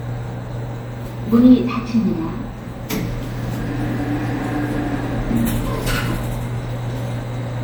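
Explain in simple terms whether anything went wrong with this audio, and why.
Something did go wrong, and it lasts from start to finish. The sound is swirly and hollow, as if heard through a tube. Sharp starts of sounds are blurred and soft. This is generation loss. The likely cause is that the audio was saved as an MP3 about four times in a row. Each save throws away a little more detail in a slightly different place, so the damage keeps building up.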